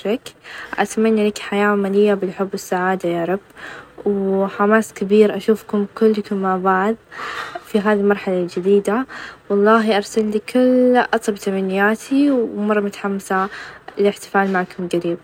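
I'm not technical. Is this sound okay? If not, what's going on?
Yes, this one sounds fine, and there's nothing here that needs fixing.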